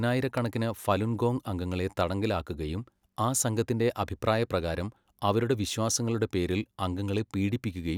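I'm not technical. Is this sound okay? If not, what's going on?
No. At 0.38 to 0.40 s, just before "ഫലുൻ ഗോങ് അംഗങ്ങളെ തടങ്കലിലാക്കുകയും", a single loud pop cuts in, sharp and clearly louder than the speech, which carries on beneath it. It's likely an electrical jolt, such as a plug, switch or static spark, reaching the recording.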